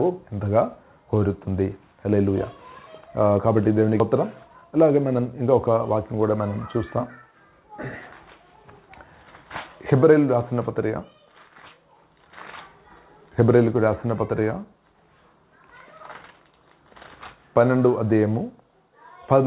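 At 4.0 s the audio makes a skip ahead: roughly 0.7 s of sound is simply absent, and the material on either side is butted together with no silence or filler in between. A stretch of audio was dropped while later audio was already waiting, so playback could jump forward, shrinking the delay by about the same amount. That seamless jump is what separates it from a dropout or concealment gap, where you would hear a hole, a fade or a smeared patch bridging the loss.

Right after, from 4.14 s to 5.77 s, a jitter buffer speed-up follows. The buffer was still holding more audio than its target, so the receiver trimmed many tiny pitch-period-sized slices in succession, around 150 ms in total, making playback run at about 108% of normal speed. The sound is hurried but its pitch stays put, which distinguishes it from a sample-rate or clock mismatch, where speeding up would also raise the pitch. Throughout, the G.711 mu-law call path leaves nothing above 4 kHz.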